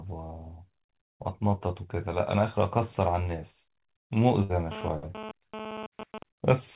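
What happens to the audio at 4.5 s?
At 4.43 to 4.52 s there's a burst of packet loss: about 60 ms of speech never arrived, so the receiver stretches the last sound and fades it down, then picks up about 60 ms further on, with that stretch of speech simply skipped.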